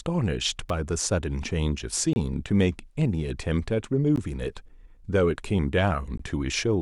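At 0.69 s a sharp snap cuts across the speech, most likely an electrical switching spike from a nearby switch, motor or static discharge arcing into the line. On a waveform it is a narrow vertical burst; a spectrogram shows a thin broadband stripe.

Gaps between stream segments follow at 2.13 to 2.16 s, 4.16 s and 6.18 s, spaced roughly every 2 seconds. Mismatched segment timestamps leave holes of about 15 to 27 ms, filled with silence. Each appears as a hard-edged flat line in the waveform and a clean vertical blank in the spectrogram.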